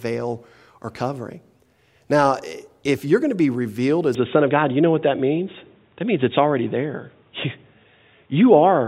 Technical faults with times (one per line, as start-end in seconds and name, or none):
4.15-8.87 input switched to a poorer device